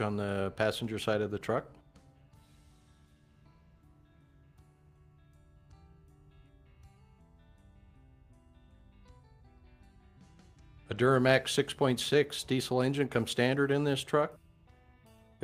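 Nothing is technically wrong with this clip, so there are no times or causes to report.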